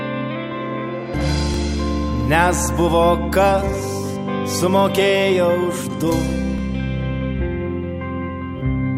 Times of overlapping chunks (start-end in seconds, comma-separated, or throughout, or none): 1.54-1.56, 6.58